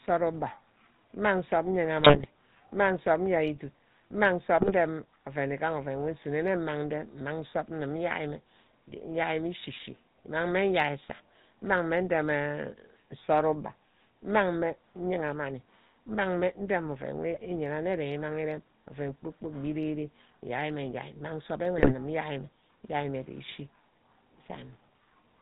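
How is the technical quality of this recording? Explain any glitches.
The speech is degraded throughout by a low-rate phone codec, with four brief bursts of corruption on top.

GSM full-rate codec, whole clip: sparse pulse excitation and no content above 4 kHz give a buzzy, gravelly roughness, unlike plain band-limiting, which fits a 13 kbps coder.

GSM bit errors, 2.00–2.26 s, 4.56–4.72 s, 17.34–17.46 s and 21.78–21.93 s: corrupted filter, pitch and gain values make squawks, pops and gargling, not the silent gaps of dropouts.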